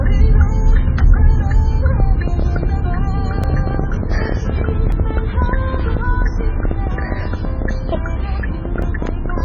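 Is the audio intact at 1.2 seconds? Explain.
No. At 1.2 seconds the sound carries the same damage heard across the whole clip, likely from MP3 compression at a severe bit shortage, the kind a rate around 16 kbps produces. With so few bits, the encoder cuts the treble at a fixed frequency and drops weak frequency components that flicker in and out between frames. The result is dull, muffled sound with a watery, swirling texture, metallic chirping on bright detail, and smeared attacks.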